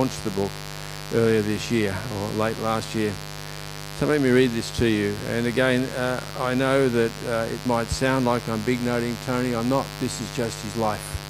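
From start to finish, mains buzz runs under the sound. Interference from the 50 Hz power supply has got into the signal path, most plausibly through a dimmer, a rectifier or an unshielded cable, injecting sharp spikes twice per mains cycle. Those spikes spread into a dense stack of 50 Hz harmonics reaching up into the kilohertz range, heard as a steady, raspy buzz sitting only moderately below the wanted sound and never letting up.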